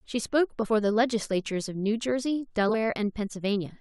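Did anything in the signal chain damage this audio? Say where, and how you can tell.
Yes: compressed frames skipped at the codec or storage stage, around 0.62–0.66 s and 2.68–2.75 s. Roughly 50 ms, then about 150 ms, of speech vanish, the audio jumping ahead at each join.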